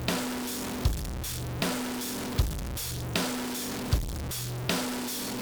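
From start to finish, the audio carries a harsh, buzzy distortion. Quiet passages never fall silent. They stay filled with a gritty noise. This points to a stuck bit, likely from a broken data line or a faulty converter. One bit is frozen at a fixed value. Roughly half the samples land off by that bit's weight, a step of about -30 dBFS. The error tracks the waveform, so it buzzes. Near zero it flips with the sign, so the pauses fill with noise.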